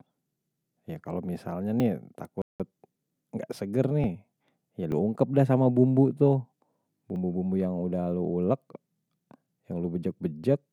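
At 1.8 s, right after "kalau misalnya", the speech gives a small jump forward with no gap. This points to a dropped buffer (overrun): the audio software likely failed to collect its samples in time, the hardware overwrote them, and the two sides were spliced together. Only about a hundredth of a second is missing, so the result is a brief skip rather than a lost syllable. The same skip returns at 4.04 s, 4.92 s and 7.16 s.

From 2.42 s to 2.60 s the sound drops to about 0.18 s of clean silence and then resumes. This is a Bluetooth stall, likely caused by radio interference that delayed packets until the headphones' buffer ran empty and playback paused for the retransmissions. The overruns remove audio and butt the edges together. The stall inserts an actual silent gap before the sound continues.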